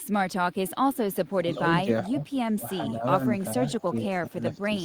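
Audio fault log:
0.52–0.70 s, echo leak: a far-end echo canceller likely let part of its loudspeaker pickup through, returning a faint copy of the speech about 435 ms late and roughly 30 dB down, heard as a brief ghostly repeat.
1.43, 1.84, 2.09, 2.97, 3.80, 4.19, 4.54 s, speech suppressed in double talk: the echo canceller likely mistook overlapping talk for echo and ducked the speech, causing short dips of 40 to 150 ms, between about 5 and 15 dB deep, that make words briefly fade.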